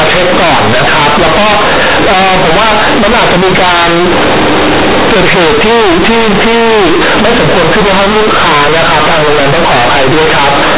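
Companded audio read as linear runs throughout this speech clip: A-law bytes are played as plain 8-bit samples without expansion, giving loud, buzzy distortion and heavy noise in pauses, over a 4 kHz telephone band.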